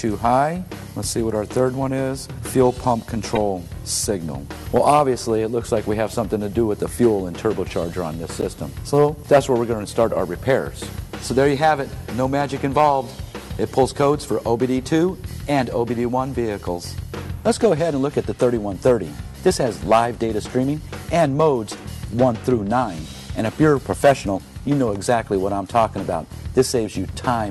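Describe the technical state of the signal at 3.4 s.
At 3.35 to 3.38 s there is a corrupt frame decoded: a couple of compressed frames arrived with damaged bits and were played anyway, so misread codes and gains put energy in the wrong bands, heard as a brief, sharp burst peaking around -5 dBFS.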